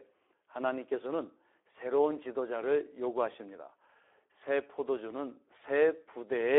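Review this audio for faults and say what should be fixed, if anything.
Speex codec damage runs through the whole speech clip. The audio is confined to roughly 300 Hz to 3.5 kHz, and too few bits for the excitation leave it noisy and hoarse, which fits a low Speex rate near 11 kbps. Prevent it by using a wideband codec such as Opus at an adequate bitrate.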